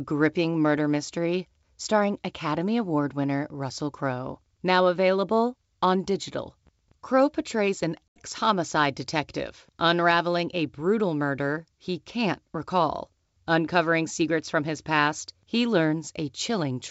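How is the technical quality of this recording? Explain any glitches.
One audible glitch stands out in this wideband speech recording, coded with G.722 at 64 kbit/s with at most faint coding damage. Packet loss on an ADPCM call appears from 8.09 to 8.2 s. About 80 ms of audio, roughly four packets, drops out and is filled with silence, leaving a hard-edged hole. Because the receiving decoder's adaptive predictor and step size drift away from the sender's during the gap, the speech comes back with brief, slight distortion, settling within a few tens of milliseconds.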